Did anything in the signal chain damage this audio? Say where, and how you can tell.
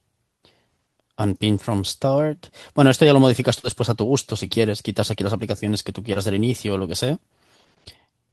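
Yes. The network stage lost audio in transit, and the receiver's decoder covered the gaps with short concealed packet loss. About 40 ms went missing at 3.59 to 3.65 s and about 20 ms at 6.13 to 6.17 s. In each hole the decoder extended the preceding speech, carrying its pitch forward or substituting shaped noise, then crossfaded back. What you hear is a brief smeared or wobbling patch.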